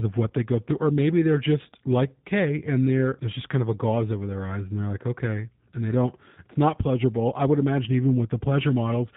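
From start to finish, the speech carries G.729 codec damage, plainly audible. The sound suggests a low bitrate near 8 kbit/s. Nothing above 4 kHz survives. Each frame is rebuilt from a few pulses and a pitch model. The result sounds rough and slightly synthetic.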